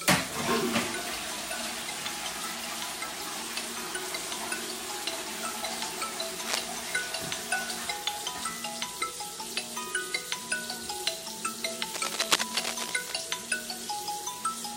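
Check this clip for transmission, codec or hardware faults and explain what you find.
Two bursts of cable scratch noise occur, at 6.46 to 6.65 s and 11.94 to 13.12 s. A worn, moving cable or connector likely varied its contact resistance, adding dense, uneven scratching at roughly the sound's own level.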